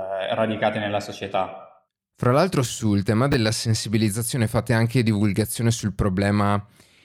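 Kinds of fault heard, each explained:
Chunks out of order: a 10 ms block of audio reached the output one chunk late, so it plays after the block that should have followed it. Nothing is dropped, but the sequence is swapped across three hard joins. Between 3.32 and 3.34 s, just after "l'altro sul tema" and before "sensibilizzazione fate anche divulgazione", this makes a brief jumbled stutter.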